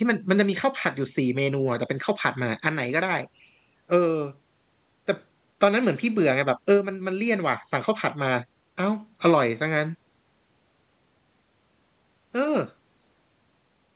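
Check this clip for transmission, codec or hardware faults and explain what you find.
Nothing here sounds like a fault: the speech comes through a normal call path, where everything above about 4 kHz is missing as you'd expect from a narrowband phone codec, and there are no dropouts, glitches or hardware noises anywhere.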